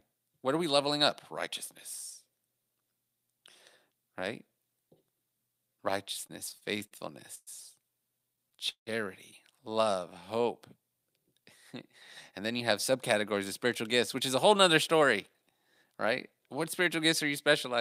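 From 6.27 to 6.93 s the speech shows repeated stalls (stutter): five brief gaps, the longest 48 ms, filled by continuing the preceding sound, about 118 ms in all and 18% of that span. Packets were arriving late, so the jitter buffer kept emptying. Nothing is lost, but delivery drags and catches.

At 7.35 to 7.49 s there is a call audio freeze lasting 114 ms. The last sound is held and fades, ending in about 30 ms of silence before the speech resumes where it stopped. The likely cause is packets held up in transit that drained the buffer, adding 114 ms of delay.

A second stutter runs from 8.19 to 8.89 s, with six gaps filling 206 ms, or 29% of the span. One 161 ms gap dominates, so the concealed sound there is held long enough to fade.

From 9.73 to 10.43 s a jitter buffer slow-down stretches the speech by 56 ms, to 93% speed. The receiver repeated single pitch periods to build reserve, so sounds are drawn out at unchanged pitch, with a slight warble possible.

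From 12.95 to 16.47 s a jitter buffer speed-up removes about a fifth of a second of short pitch-period pieces, running the speech at 105% speed at the same pitch. The buffer held more than its target and was trimming delay, which leaves the speech slightly hurried.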